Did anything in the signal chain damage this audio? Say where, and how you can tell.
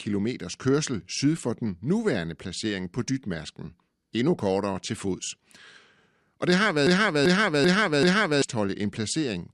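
Yes. A broken-record loop appears at 6.87 s, right after "det har", and runs to 8.42 s. A stall somewhere in playback or streaming, likely a decoder or buffer that stopped receiving fresh data, kept re-emitting the last fragment it held. You can hear a 388 ms slice of the speech repeating identically four times, back to back, with no variation between passes. The speech that should have filled that stretch is simply gone.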